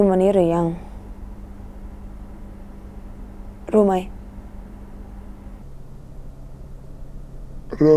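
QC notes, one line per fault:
5.62–7.96 s, wrong sample rate: from here to the end the speech suddenly drops and drags, running at two-thirds speed and about 7 semitones lower, so everything sounds heavy and slowed. Nothing was converted; the samples are just being clocked out more slowly than they went in, which stretches time and lowers pitch by the same ratio. That 2:3 ratio fits 48 kHz material being played back at 32 kHz.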